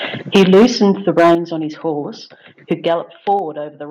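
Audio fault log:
0.35–0.89 s and 1.17–1.35 s, microphone overload: The loudest syllables turn harsh and crackly, with a flattened, buzzy edge instead of clean peaks, and a large share of the waveform is squared off in each stretch. The input was likely driving the converter about 9 dB past its ceiling in the first burst and about 6 dB past it in the second, so the tops of the peaks are sliced off and the cut adds gritty distortion.
0.36 s, 1.35 s and 3.39 s, microphone volume stepped down: Voice and background drop in level abruptly, by about 3 dB, about 8 dB and about 4 dB respectively. The first cut lands just as the first distorted stretch begins, and the second comes right where the second overload ends. This is likely the call software reacting to an input it judged too loud and lowering the device's microphone gain in a single step each time.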